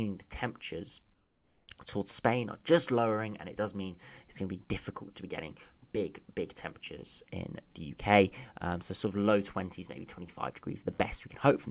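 From 1.14 to 1.68 s, the real background, about 41 dB below the loudest passages, gives way to a steady, featureless hiss about 4 dB quieter. This is comfort noise in place of the background, likely from discontinuous transmission, with the receiver synthesising noise through the 540 ms pause. Nothing reaches above 4 kHz, which fits a narrowband G.711 call path.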